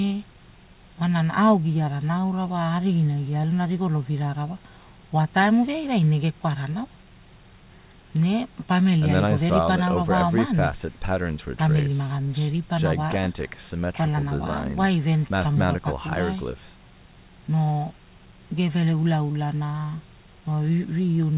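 Speech with no technical faults to report. It has the narrow sound of a phone call, with nothing above about 4 kHz, which fits the G.711 A-law codec on the call path.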